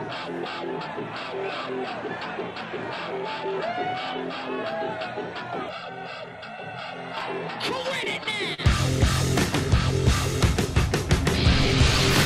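From 5.69 to 7.17 s, one channel runs roughly 1.5 ms behind the other, and the two are summed to mono, producing channel delay (comb filtering). The shared content cancels at evenly spaced frequencies, with the first notch around 300 Hz, so the sound turns hollow and phasey.

From 7.77 to 8.60 s, the playback buffer repeatedly ran dry as data arrived too late, causing repeated stalls (stutter). The receiver bridged six brief gaps, the longest 40 ms, by extending the last sound. Nothing is lost, but about 86 ms of filler makes the audio drag and stutter.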